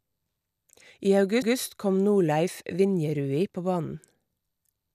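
At 1.42 to 1.56 s, a 144 ms stretch of speech plays a second time: repeated frames, most likely a run of about six compressed frames written or sent twice. Unlike an echo or loss concealment, the repeat is an exact copy that adds 144 ms to the clip.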